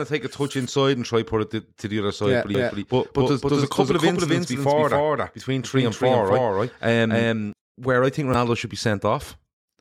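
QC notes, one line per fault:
2.55–7.53 s, doubled audio track: a second, equally loud copy of the speech trails by roughly 300 ms with no room decay, likely from a slower duplicate capture path.
8.34 s, damaged data in a compressed stream: a brief glitch where the decoder misreads corrupted frames, loses sync and resumes at the next frame header.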